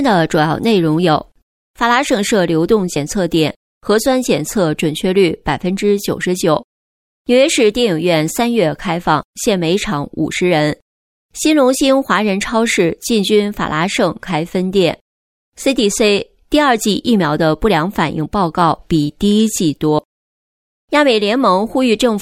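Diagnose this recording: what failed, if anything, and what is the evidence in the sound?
Compressed frames skipped at 19.98 s, a fault at the codec stage. The sound jumps forward by roughly 70 ms, which points to about two 32 ms frames that were missing or rejected by the decoder.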